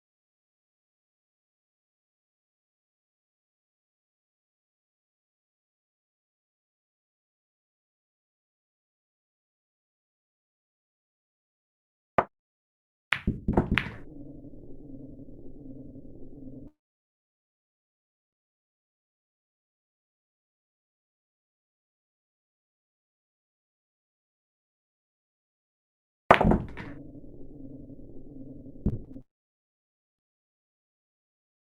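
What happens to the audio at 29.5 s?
At 29.5 s the sound breaks off: from 29.21 to 30.21 s the last sound smears into a brief fading buzz, then near silence for roughly 0.9 s before the audio resumes with that stretch gone, most likely a long network dropout where the receiver concealed missing packets.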